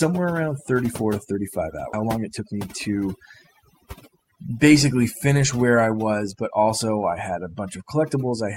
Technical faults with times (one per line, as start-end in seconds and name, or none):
0.00-8.56 overdone noise removal
1.93-1.95 skip ahead
2.03-3.02 jitter buffer speed-up
4.08-4.66 jitter buffer speed-up